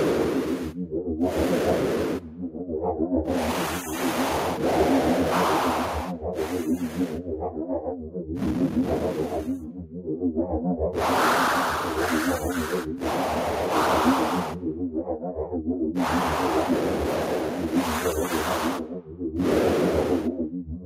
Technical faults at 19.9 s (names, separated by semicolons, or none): none